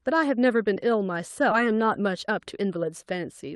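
At 1.51 s a skip ahead occurs: roughly 0.7 s of queued speech was dropped, so playback jumps forward with no gap and the two sides join abruptly. From 1.63 to 3.12 s a jitter buffer speed-up trims repeated pitch-period slices, about a tenth of a second in all, making the speech run 107% fast and sound hurried at unchanged pitch.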